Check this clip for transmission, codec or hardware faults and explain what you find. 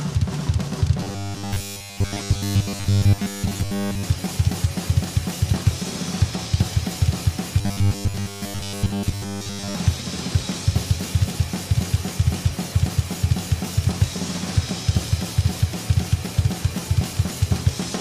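There's one fault, and it shows up twice: robotic sound from repeated short buffers, from 1.00 to 4.03 s and again from 7.59 to 9.75 s. In both stretches the audio turns into a stiff, metallic buzz locked at 100 Hz. The likely cause is a starved stream: with no fresh data arriving, a chunk of around 10 ms gets looped over and over while most of the real audio is dropped. That loop rate is what stamps the fixed pitch on it.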